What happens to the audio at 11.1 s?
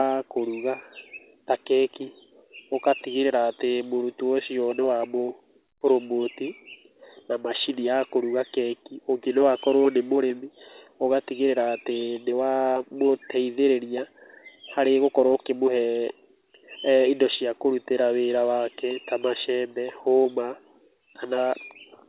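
At 11.1 s the speech carries on intact, with no dropout, glitch or distortion, only the steady narrowband sound of the call path, which passes nothing above 4 kHz.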